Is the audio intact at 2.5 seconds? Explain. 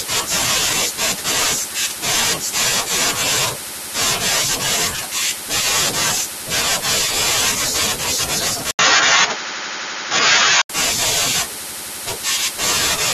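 Yes, at 2.5 seconds the speech plays through cleanly, with no dropout, click, distortion or other fault at that point.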